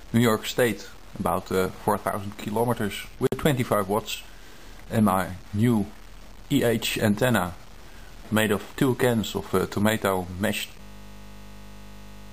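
At 3.27 s a gap at a join of encoded pieces cuts the sound for about 54 ms before it resumes where it stopped, consistent with separately encoded segments joined without trimming encoder delay and final-frame padding. A waveform shows a short flat stretch with abrupt, slightly smeared edges, and a spectrogram shows a thin vertical blank band across all frequencies. From 10.81 s to the end, a system hang loop repeats one 20 ms slice of audio dozens of times, heard as a steady 50 Hz buzz. This points to the computer or driver freezing while the sound hardware kept replaying a ring buffer of about 20 ms. The waveform becomes a rigidly periodic pattern, and the spectrogram shows evenly spaced horizontal harmonic lines at multiples of 50 Hz.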